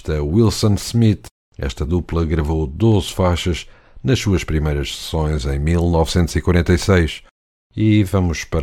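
Speech clip, no audible faults.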